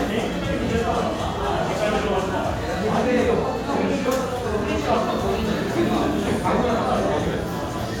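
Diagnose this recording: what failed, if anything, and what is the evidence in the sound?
Nothing in this recording points to a failure at any stage of the chain; the audio shows no defects.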